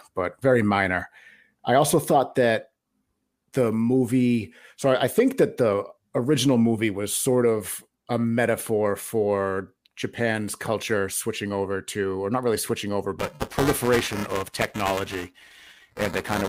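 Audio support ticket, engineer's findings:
Buffer tearing from 13.19 s to end of clip, starting right after "not really switching over". Symptom: robotic buzz at 375 Hz over the speech, present only with signal. Points to a 128-sample buffer. Writer and hardware reader slipped and cross inside every period. Nearly each whole period replays audio from one lap earlier, roughly 7 ms old, with hard joins on both sides. Component: audio output ring buffer.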